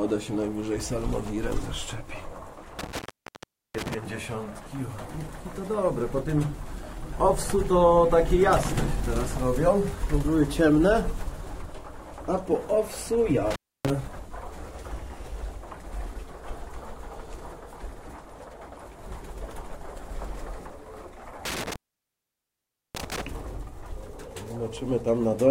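Intermittent contact at 2.79–3.94 s, 13.51–13.90 s and 21.45–23.21 s: a loose connection opens for 0.76, 0.29 and 1.19 s, dropping the sound to faint hiss with crackle at each break.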